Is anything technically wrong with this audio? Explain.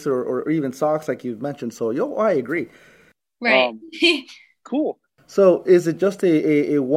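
No, nothing technically wrong is audible anywhere in this speech recording.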